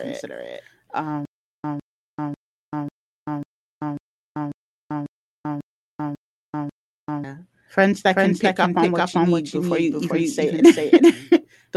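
From the very start the whole thing has a doubled audio track: a second full-band copy of the speech trails the first by about 0.4 s, at roughly the same loudness, so every phrase lands twice like a slapback with no room around it. That's likely a second capture through a slower route, or an edit leaving two copies out of step. It stays dry and hard-edged the whole way, with none of the decay a real echo would have.

Then from 1.25 s to 7.24 s there's a stutter with silent gaps. A 156 ms burst plays, drops into about 388 ms of dead digital silence, and comes back, eleven times in all at a steady 544 ms pace. That rhythm likely comes from the stream stalling and replaying its last fragment on each retry before running dry. Whatever speech should have filled that stretch is simply gone. Underneath it all, the Opus call path shows up only as its usual coding noise, with the top end cut off around 12 kHz.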